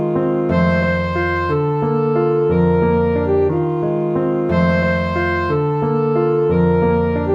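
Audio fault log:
No fault is logged for this audio.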